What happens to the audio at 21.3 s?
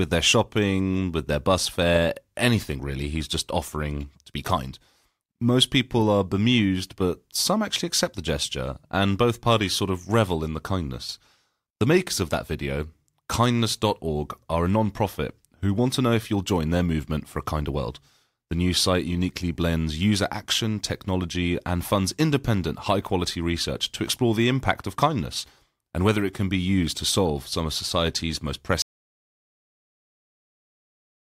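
Nothing goes wrong at 21.3 s; the audio carries straight through that point without any dropout, click, distortion or other fault.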